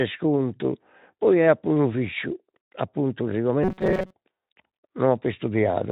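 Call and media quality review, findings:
Robotic sound from repeated short buffers, 3.63 to 4.14 s: rigid metallic buzz at a fixed 188 Hz over the speech. Likely a starved playback buffer re-playing its last block, about 5.3 ms long, while most of the real audio is dropped. Unlike Speex codec roughness, it is confined to this half-second, and the buzz rate stays fixed instead of following the voice.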